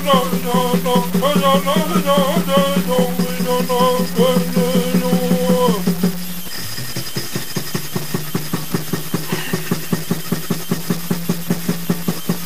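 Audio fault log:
throughout, low bit depth without dither: a coarse, grainy distortion rides on the sound and changes its texture as the level moves, turning quiet passages gritty and making the softest moments sputter between two levels or drop out to silence. With the error only about 10 dB below the signal, the grit is strong. This likely comes from truncating the audio to about 4 bits with no dither, so the rounding error tracks the waveform instead of forming a steady hiss.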